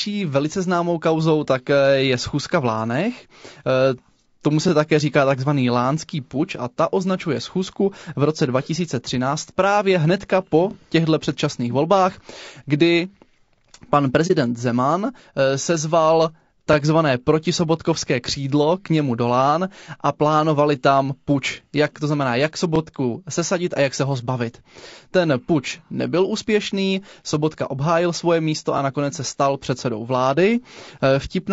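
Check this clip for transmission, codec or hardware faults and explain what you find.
Two faults are audible: a codec coloration throughout the speech, and one brief dropout.

Throughout, the voice sounds rough and grainy, with noise between harmonics. This is likely low-delay AAC compression (AAC-ELD), which codes each frame with a low-delay window, here at a low bitrate around 32 kbps.

From 14.27 to 14.31 s, the sound fades into a brief dip. This is AAC frame loss with muting: one lost frame's spectrum was zeroed, and overlapping windows smoothed the edges.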